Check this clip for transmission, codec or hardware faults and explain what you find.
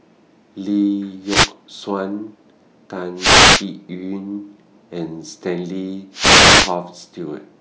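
Three short bursts of hiss break into the speech, at 1.24 to 1.52 s, 3.16 to 3.65 s and 6.12 to 6.76 s, each a swish of static. These are wireless microphone noise hits. When the analogue FM radio link between the microphone and the receiver loses strength as reflected signals cancel one another, the receiver's own noise rises above the weakened carrier, giving these swishes of roughly 0.3 to 0.6 s.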